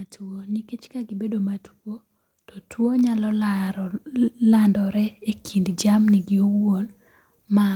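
A speech recording with automatic gain rising, heard twice. From 0.18 to 1.61 s the level climbs by about 6 dB. From 2.76 to 3.83 s it climbs again by about 5 dB. Each time, the voice and the background noise swell together over roughly a second. That shared rise is the giveaway. The automatic gain control judged the input too quiet and slowly raised its gain, lifting everything it passed.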